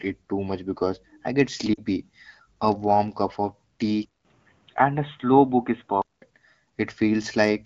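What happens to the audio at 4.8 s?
At 4.8 s you're in the middle of a stretch from about 4.05 to 6.22 s where the input likely switched to a poorer device. There's a 200 ms gap at the switch, then the speech goes dull and narrower with a faint new noise floor, though the level barely changes.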